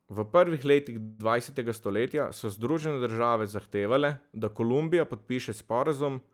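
From 1.01 to 1.21 s the speech halts in a call audio freeze: a fading buzz fills about 175 ms, likely from a drained jitter buffer, then speech resumes intact, later.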